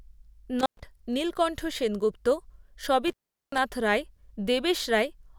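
At 0.60 s and again at 3.08 s the speech drops out through an intermittent contact, a loose cable or plug briefly losing connection. The first event runs to 0.83 s with the line open for about 113 ms. The second runs to 3.58 s with a 391 ms gap. Each begins and ends with crackle, and faint hiss fills the silence. On a waveform the signal collapses to a thin noise floor between jagged spikes. A spectrogram shows a near-empty band framed by broadband vertical streaks.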